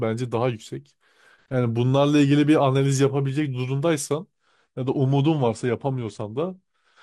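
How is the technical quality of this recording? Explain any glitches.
The technical quality drops partway through: from 4.33 s to the end, the speech switches abruptly to poorer encoding. That change is an adaptive stream at a lower bitrate. When the connection slowed, the player swapped to a leaner version of the stream with no gap, so the treble vanishes above about 10.1 kHz. The sound points to roughly a drop from 96 to 32 kbit/s AAC. On a spectrogram, the upper band cuts off sharply at 4.33 s. The waveform shows no break.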